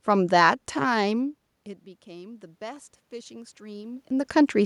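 Right after the talker drops back at around 1 s, the input falls by about 21 dB, and from 1.14 s to 4.61 s you can hear automatic gain rising. The AGC decides things have gone too quiet and slowly adds about 6 dB over those three and a half seconds. The room noise swells right along with the voice, which gives the slow lift away. The talker shifts again around 3.5 s.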